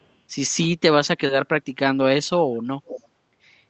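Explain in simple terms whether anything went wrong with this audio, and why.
Echo leak, from 2.86 to 3.03 s: a faint, much quieter repeat of the speech arrives about 0.46 s late. Most likely the other side's loudspeaker fed its microphone, and their echo canceller didn't fully remove it, so a scrap was sent back.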